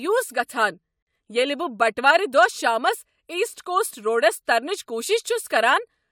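At 1.03 s the speech just drops out for about 45 ms and then picks up again at 1.07 s, right where it left off. That's a gap at a join of encoded pieces: the audio was encoded in separate chunks and butted together untrimmed, so the encoder's start-up silence and the padding on the last frame both stayed in. The codec smears the edges, so the truly silent part is shorter, and you hear a quick hole in the speech.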